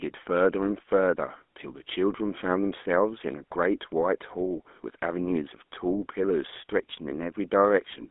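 Throughout, a GSM full-rate codec rebuilt the speech from a vocal-tract model driven by sparse pulses, narrowing it to 250 Hz–3.5 kHz with plainly audible buzzy, gravelly roughness.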